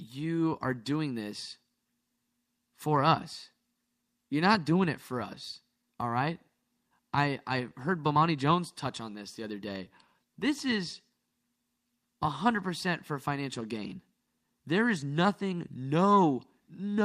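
Speech, affected by clock drift between sender and receiver: the sender's clock runs roughly five percent fast, so the receiver's jitter buffer keeps overfilling and small timing hiccups recur unevenly throughout. From 0.17 s to 17.02 s, repeated timing corrections trim short pieces to keep pace, so the speech plays at 105% speed with slight skips and an unsteady tempo.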